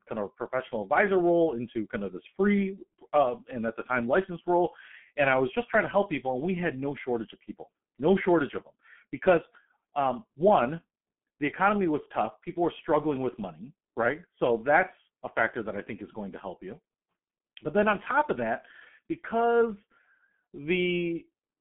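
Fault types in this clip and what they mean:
G.723.1 codec: an old internet-telephony coder that chops the signal into 30 ms frames and rebuilds the speech from a slowly updated voice model, so it sounds squeezed hard. The damage here is heavy. Nothing survives above about 3.7 kHz, the low end thins out below around 150 Hz, the speech comes across muffled and hoarse, and consonants smear into each other, all of which fits a bitrate of around 6 kbit/s.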